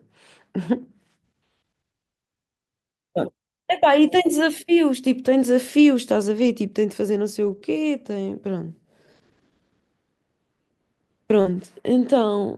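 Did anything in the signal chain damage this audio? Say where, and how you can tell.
Yes, the damage comes from the network stage of a packet-based speech call. Losses at 3.27 s, 6.37–6.47 s, 7.43–7.57 s, 8.29 s and 11.45–11.51 s are each a lost packet rebuilt from error correction. The following packet carried a low-bitrate copy of the missing audio. There is no gap or smear, only a briefly rougher, noisier patch.

Short concealed packet loss occurs at 7.59–7.63 s (about 20 ms missing) and 11.41–11.47 s (about 40 ms). Here no copy arrived, so the decoder extended the preceding sound and blended back in. The result is a smear or wobble of invented audio rather than a degraded but real copy.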